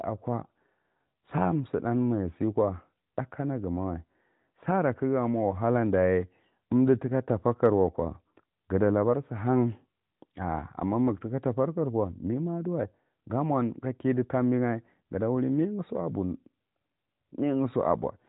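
Nothing goes wrong in this speech clip, and the only thing to notice is the narrowband phone-call character of the AMR mobile codec, with nothing above about 3.8 kHz.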